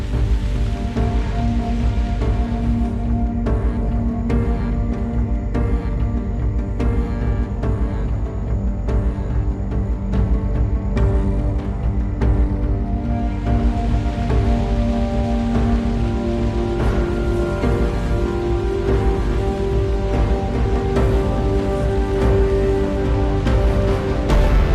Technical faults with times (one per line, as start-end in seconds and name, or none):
16.58-20.75 call bitrate drop